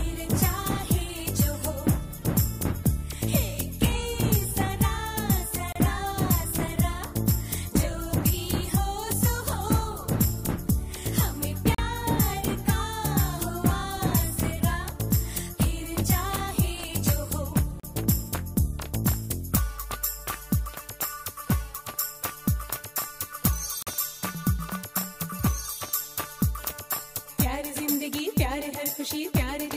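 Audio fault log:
5.72 to 5.76, 11.75 to 11.78, 17.80 to 17.84 and 23.83 to 23.87 s, gap between stream segments: four short, hard-edged dropouts to silence, roughly every 6 seconds, lasting about 31, 38, 37 and 43 ms. The timestamps of consecutive 6-second segments don't quite meet, so the player pads each join with silence. Nothing is actually missing; the sound just stops abruptly, then resumes at each boundary.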